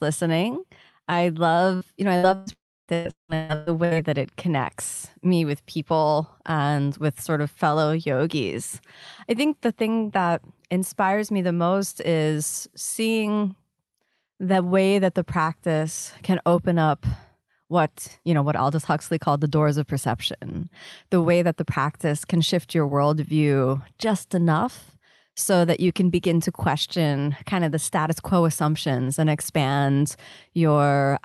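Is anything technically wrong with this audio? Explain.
Yes, the audio breaks up repeatedly in its first four seconds.

Burst of packet loss at 1.75 to 1.84 s (after "listening I", before "you know I"), 2.17 to 2.26 s and 2.35 to 2.50 s (after "you know I"): short runs of packets never arrived, so the receiver extended the last sound and faded it. You hear a brief held buzz or fading hiss, then a jump past about 60, 60 and 120 ms of missing audio.

Long network dropout at 2.53 to 2.91 s: a held, fading tail gives way to roughly 0.3 s of silence before sound returns with about 360 ms gone. The likely cause is a network stall during which nothing reached the receiver.

Repeated packet loss (robotic sound) from 2.94 to 3.94 s, ending just before "that it connects me": five separate holes, the longest 177 ms, were each patched by stretching earlier sound. About 61% of that second is synthetic fill, so the audio turns choppy, with about 600 ms missing. 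The surrounding audio shows the Opus call path's 12 kHz bandwidth limit.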